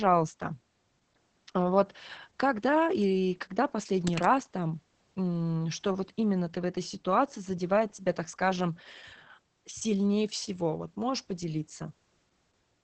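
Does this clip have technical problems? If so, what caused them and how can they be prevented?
Yes. Throughout, the speech carries Opus voice compression: nothing above about 8.5 kHz, with a hoarse, slightly robotic grain from coarsely coded excitation. This points to the SILK speech coder running at roughly 10 kbps. Unlike a simple low-pass filter, this dulls the top and also roughens the voice itself. Encoding at a higher bitrate, such as 24 kbps or more, would prevent it.

From 4.07 to 4.27 s, between "вот когда или когда" and "там м что вот", there is cable scratch noise: a dense, uneven rustling burst, fairly strong at roughly 10 dB below the speech. It is likely caused by a worn cable or connector being moved and its contact resistance fluctuating. A short, packed scratch like this differs from isolated clicks or steady crackle. Replacing or cleaning worn cables and connectors, and keeping them still while recording, would prevent it.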